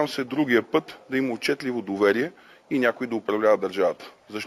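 Throughout the clip there is imaging from linear upsampling. The sound was brought up to a higher rate by joining samples with straight lines, which fits a move from 16 kHz to 48 kHz. That crude interpolation dulls the top of the original band and leaves a faint mirrored copy between 8 kHz and 16 kHz, roughly 35 dB down, heard as a thin metallic shimmer. Unlike aliasing, nothing folds into the original band. The shimmer is a reflection sitting above it.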